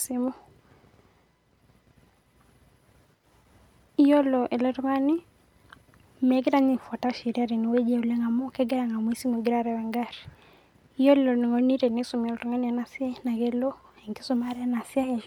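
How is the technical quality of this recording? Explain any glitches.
No technical faults are audible.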